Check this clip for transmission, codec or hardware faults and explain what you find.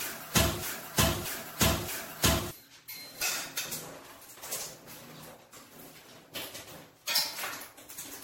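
Two problems stand out in this recording of everyday sounds: a stuck loop at the start and heavy codec wear running the whole way through.

From the very start to about 2.51 s there's a broken-record loop that's already going when the clip opens. A chunk of about 0.63 s plays back to back three times, identical each pass. That's most likely a player, encoder or stream stalling and resending the last fragment it held. Whatever should have played in those couple of seconds is just gone, replaced by the repeat.

Across the entire clip there's generation loss. It sounds swirly and hollow, transients are smeared, and there's nothing above 16.5 kHz. That points to a low-bitrate MP3 chain around 64 kbit/s. The damage is worse than one pass at that rate would give, so the likely cause is repeated decode and re-encode, something like seven rounds. Each pass requantises on a shifted frame grid, so the noise and spectral gaps keep piling up.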